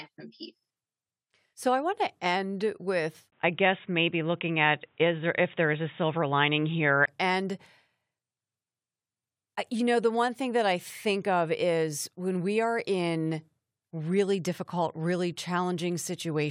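Right after "want to end with", at 3.30 s, the speech turns dull and boxy after a brief 20 ms gap, with nothing above 3.8 kHz, a modest change in level and a faint new background noise well below the signal. At 7.08 s the fuller sound returns. This pattern of input switched to a poorer device likely comes from the recording briefly moving to a narrower-band microphone or headset call profile with its own tone and noise floor.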